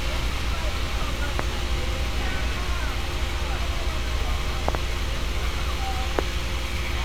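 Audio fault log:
1.39–1.42 s, 4.69–4.77 s, 6.19–6.21 s: loud pop. Each one jumps out roughly 20 dB above the sound. There's a single sharp hit at 1.39 and 6.19, and a quick double at 4.69. The sound keeps going underneath each one, so it's something added on top, not a dropout. That points to a sudden voltage spike getting into the signal, likely from a connector, switch, static discharge or a driver hiccup, with the following circuitry shaping it into a short thump.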